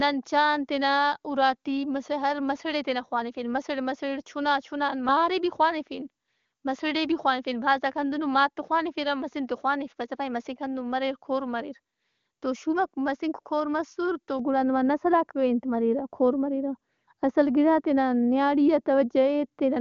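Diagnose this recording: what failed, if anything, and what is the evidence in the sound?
A de-emphasis filter was applied wrongly in call processing, cutting treble on audio that had no pre-emphasis or had already been de-emphasised. From 14.39 s, after "شُوماک مسنک کور مسرتو", to the end, the speech turns dull and muffled, about 11 dB down at 10 kHz.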